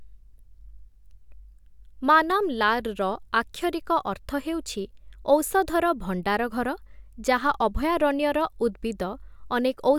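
No technical faults are audible anywhere in the speech recording.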